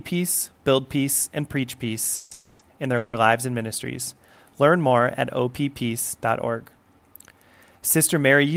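Speech with call audio freeze at 2.15–2.33, 2.33–2.61 and 2.97–3.15 s: fading buzz or hiss fills of 160, 260 and 160 ms, smeared horizontal bands on a spectrogram, then speech resumes later, likely from jitter-buffer underrun.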